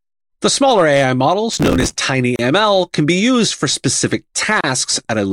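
From 1.53 to 1.97 s a processor overload crackle tears across the speech. Dozens of missed deadlines, which fits buffers of around 5 ms, each replay a scrap of old audio with hard edges. On a spectrogram this shows as dense vertical broadband streaks; the waveform shows jagged discontinuities.

A gap at a join of encoded pieces opens at 2.36 to 2.39 s, just before "can be used for", and again at 4.61 to 4.64 s, just after "be used for specific". Each is a silence of about 30 ms, encoder delay and frame padding left in, seen as a flat waveform gap and a blank spectrogram column with slightly smeared edges.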